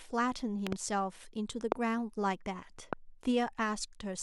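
Loud pops occur at 0.67 to 0.75 s, where two arrive in quick succession, then singly at 1.72 to 1.74 s and 2.93 to 2.95 s. Each is a sharp click-thump standing roughly 20 dB above the speech, closer to 25 dB for the middle one, while the speech carries on underneath. The likely cause is a brief voltage step or pulse, from a plug, switch, static discharge or driver glitch, added to the signal and shaped by the following circuitry.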